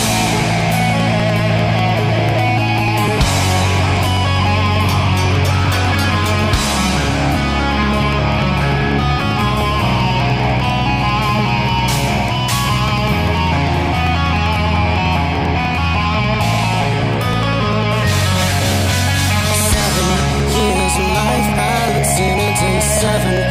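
From about 0.11 s right through to 23.37 s there's a steady train of periodic USB or driver dropouts, one every 0.099 s, so roughly ten a second and a couple of hundred in all. Each time, something blocks the audio path briefly and around a millisecond of audio is skipped outright rather than filled with silence. That splice comes across as an evenly spaced tick or pop, only audible while there's signal underneath it.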